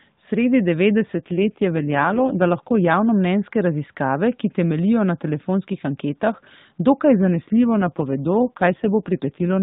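From 1.2 to 2.9 s, and again from 7.2 s (after "na telefonskih anketah dokaj") to 9.6 s, an AMR rate drop turns the speech buzzier and synthetic, fitting a fall from 12.2 to 5.9 kbps. The spectrogram keeps its 4 kHz ceiling with no gap, but harmonics blur.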